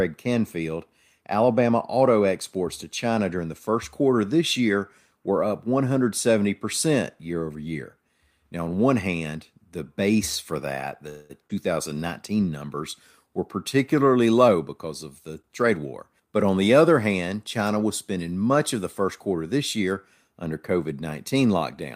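Speech recorded over a call, with four network faults. At 11.09 to 11.32 s, just after "the base for that", the sound stretches into a fading buzz for about 0.2 s, then resumes with nothing lost. This is likely a call audio freeze from held-up packets. At 11.48 s a short concealed packet loss drops about 60 ms, patched with a brief smear. From 11.54 to 11.95 s, leading into "numbers were", a jitter buffer slow-down plays at 91% speed, adding 48 ms with pitch unchanged. From 14.12 to 16.27 s a jitter buffer speed-up runs at 109%, trimming roughly 0.2 s and sounding hurried.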